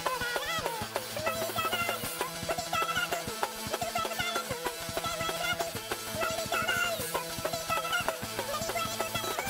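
From the first moment to the last, the audio is read two samples at a time, so it plays at double speed. The reader treated each pair of samples as one frame, as if the stream had two channels or samples twice as wide, and that's why everything runs at 2x and sits a full octave up, 12 semitones. It's chipmunky and rushed.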